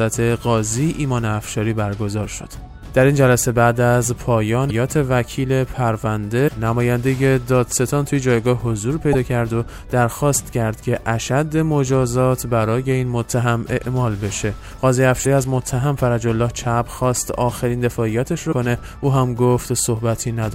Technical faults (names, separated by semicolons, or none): damaged data in a compressed stream